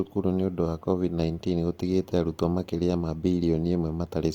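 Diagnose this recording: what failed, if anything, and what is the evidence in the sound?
Grainy, rough speech throughout, detail replaced by noise though bandwidth reaches 20.2 kHz. At the codec stage, likely Opus compression in CELT mode, fitting about 24 kbps.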